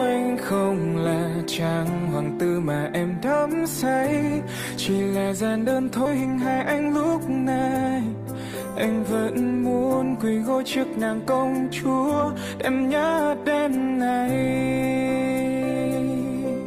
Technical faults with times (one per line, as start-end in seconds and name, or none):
6.05-6.07 skip ahead
6.71-7.84 jitter buffer speed-up